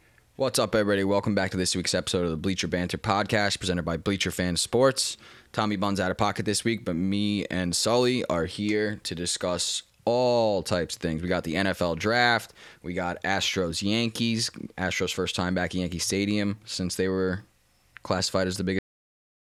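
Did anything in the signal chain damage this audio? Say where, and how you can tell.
Yes. A cut-off end damages this speech at the storage or buffer stage. Right after "since they were classified", the sound stops mid-sound at 18.79 s. It falls straight to digital silence for the last 0.74 s. There is no decay. The final buffers were never written.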